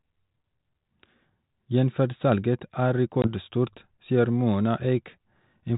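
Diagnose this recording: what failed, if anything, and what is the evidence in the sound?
The network stage failed: packet loss on an ADPCM call, around 3.22 to 3.28 s, in speech carried as G.726 at 32 kbit/s. About 20 ms of audio, roughly one packet, drops to hard-edged silence, visible on a waveform as a flat gap with abrupt walls and on a spectrogram as a clean vertical blank. Because the receiving decoder's adaptive predictor and step size lose track of the sender's, the speech resumes slightly distorted, and the distortion settles by about 3.28 s.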